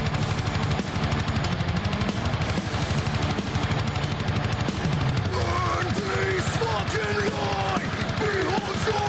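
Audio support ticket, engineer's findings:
Gain pumping throughout. Likely cause: input gain set far too high, with a fast limiter or compressor clamping it on each loud sound. Gain swinging roughly 5 dB. Dynamics squashed. Nothing above 8 kHz, consistent with the call path.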